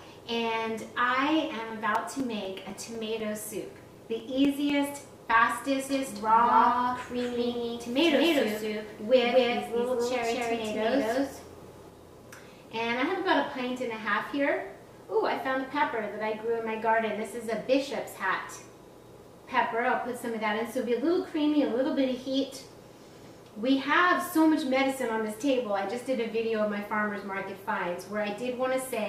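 Periodic USB or driver dropouts run from 1.70 to 4.70 s: every 0.25 s a few milliseconds of sound vanish into silence, giving a steady train of around fifteen ticks, the kind of loss caused when a recurring background task stalls the USB bus or audio driver. A doubled audio track appears from 5.89 to 11.89 s, with a full-band copy roughly as loud as the original trailing it by around 200 ms, dry and without room colour, starting and stopping abruptly, likely from a second, slower capture path mixed in alongside the first. DAB burbling hits briefly at 10.23 to 10.32 s, a short burst of noise blips in individual frequency bands. This fits a handful of corrupted MP2 frames, where residual bit errors of around a tenth of a percent slipped past error correction under weak reception.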